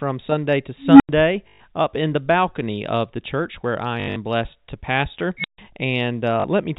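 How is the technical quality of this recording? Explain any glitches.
The recording is telephone-band speech with two bursts from an unstable filter and three dropouts patched by packet repetition. The G.711 telephone coding is audible only as the usual ceiling at 4 kHz.

Unstable filter, 0.82–1.09 s and 5.27–5.58 s: A recursive filter's feedback runs away. A low tone around 300 Hz swells over about 0.18 s, and a high squeal near 4 kHz swells over about 0.17 s. Each clips, overflows, and drops to silence for 0.09 s and 0.14 s respectively. On a waveform this shows as an expanding envelope that flattens at its clipped peak, then goes flat. On a spectrogram it is a bright horizontal line ending in a blank gap.

Packet loss with last packet repeated, 1.48–1.60 s, 4.00–4.16 s and 6.40–6.44 s: Missing packets were filled by replaying the previous one. The lost spans are 120 ms, 140 ms (scattered, with the longest run 80 ms) and 40 ms. 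The repeats fit 20 ms packets, giving a 50 Hz robotic stutter. A spectrogram shows identical repeating blocks.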